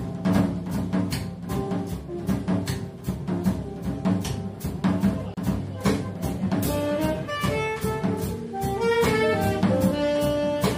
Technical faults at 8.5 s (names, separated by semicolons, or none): none